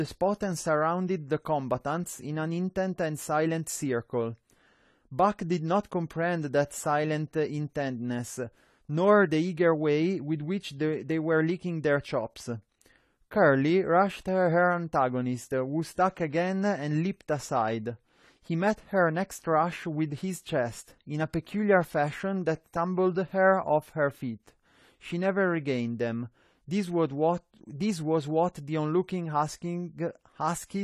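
From start to finish, the speech has likely passed through AAC compression, with the AAC-LC encoder working at a low bitrate, which fits a rate around 32 kbps. Too few bits for the frequency lines in each frame forces coarse quantisation against the hearing model, and the encoder drops the top band. Nothing remains above 14.1 kHz, and the codec damage is plainly audible, smearing the speech and giving sibilants a warbling, fizzy texture.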